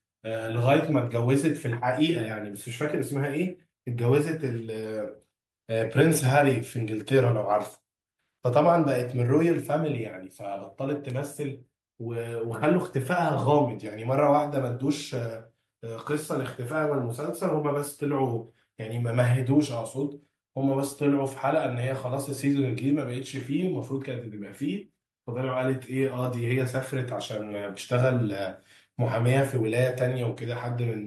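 Nothing stood out on listening to this speech recording.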